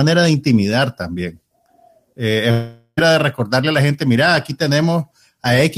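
A long network dropout runs from 2.51 to 2.99 s. About 460 ms of speech is lost, likely because packets stopped arriving, and the receiver stretches the last sound into a fading buzz before about 60 ms of silence. Speech then resumes without the missing stretch.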